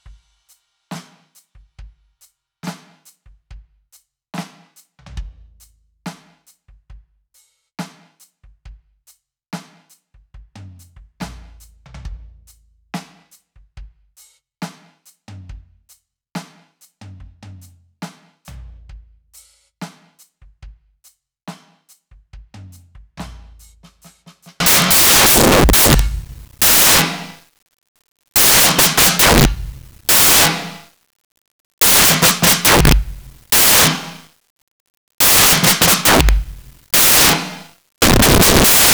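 From 24.6 s to the end at 38.9 s, the music gives way to samples built from the wrong bytes. The reader is assembling each sample from misaligned or swapped bytes, so the rapidly fluctuating low-order bits now land in the high-order position and dominate every value. The result is loud, harsh broadband noise, close to white on the loud passages. A spectrogram shows flat broadband energy across all frequencies, and the waveform becomes a dense block.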